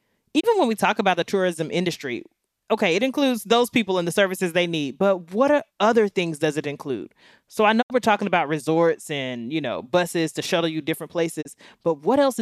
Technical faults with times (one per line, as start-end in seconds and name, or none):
0.39-0.45 digital broadcast dropout
7.81-7.92 digital broadcast dropout
11.41-11.47 digital broadcast dropout